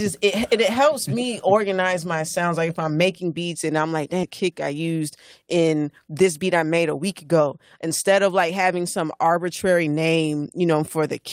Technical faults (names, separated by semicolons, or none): skip ahead; jitter buffer speed-up